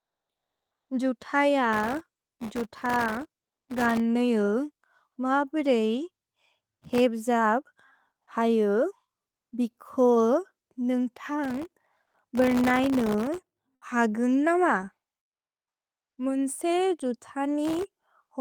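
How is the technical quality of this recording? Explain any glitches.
The recording has two kinds of glitch, and the crackle comes up four times.

The processor overload crackle runs from 1.73 to 4.00 s, 6.72 to 7.00 s, 11.44 to 13.64 s and 17.64 to 18.11 s. The machine kept missing deadlines on very short buffers, well under a millisecond each, and hundreds of those misses dropped out as tiny silent gaps. That gives a gritty, tearing crackle over the speech until the load eases.

Comfort noise in place of the background shows up from 15.31 to 16.09 s. For about 0.78 s the real room tone, already roughly 68 dB below the loud parts, gives way to a flat, featureless hiss about 18 dB quieter. That's likely discontinuous transmission, such as Opus DTX, where the receiver fills the pause with synthetic noise.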